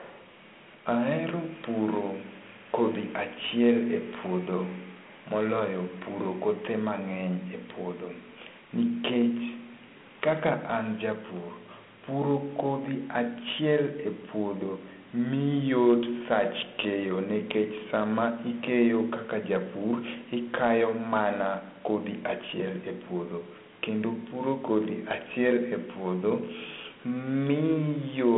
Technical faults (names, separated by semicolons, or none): Dialogic VOX ADPCM